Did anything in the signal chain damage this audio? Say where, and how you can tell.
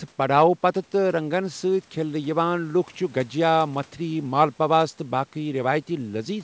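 No, the speech carries the normal marks of a call path, with nothing above 8 kHz as expected from wideband call processing and a codec like G.722, and no stage in the chain has damaged it.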